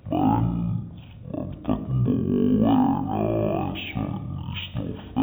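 Speech plays throughout at half speed and an octave low (a 12-semitone drop), the signature of stereo read as mono: interleaved left and right samples are taken as one channel, doubling its length. On a spectrogram, harmonics and formants sit at half their expected heights and syllables are stretched to twice their duration, with a fainter mirrored copy of the speech in the upper half. The waveform shows correspondingly drawn-out envelopes.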